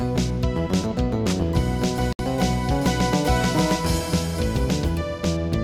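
At 2.13 s there's a digital broadcast dropout: the sound mutes for about 64 ms, which fits two lost frames, then picks up again by 2.20 s.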